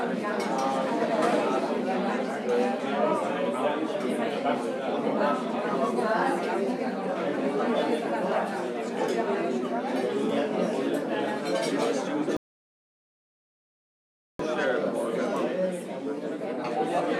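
A rebuffering stall hits at 12.37 s. The audio drops to silence until 14.40 s, then resumes exactly where it stopped. The player ran dry, adding about 2.03 s.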